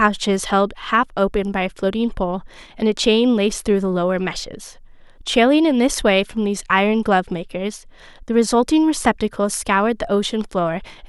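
A speech recording with no technical faults anywhere in the signal.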